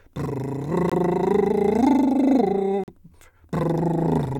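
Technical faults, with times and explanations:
0.90 to 0.93 s and 2.84 to 2.90 s, Bluetooth dropout: The music cuts to silence twice, for about 38 ms and then about 62 ms. The edges of each gap are abrupt or fade over a few milliseconds. The music then resumes further along, as if it had kept playing through the hole. The likely cause is wireless audio packets arriving too late and being dropped. The lost audio fits about 21 ms and 43 ms, which suggests one and then two missing frames.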